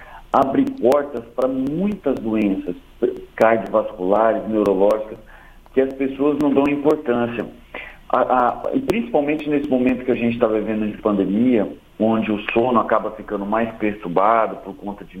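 The audio has periodic USB or driver dropouts from 0.18 s to 10.39 s: about forty regular ticks, one every 0.25 s, each where roughly a millisecond is skipped. A spectrogram shows evenly spaced thin vertical broadband lines, and the waveform shows small step discontinuities.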